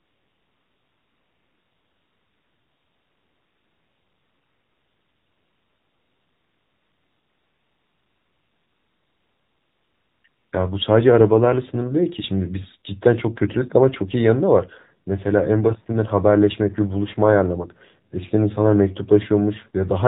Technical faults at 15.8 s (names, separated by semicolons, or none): AMR narrowband mobile codec